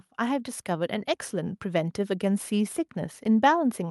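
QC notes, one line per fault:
0.18–3.91 s, automatic gain rising: the gain control judged the speech input too quiet and raised it gradually, so voice and background swell together.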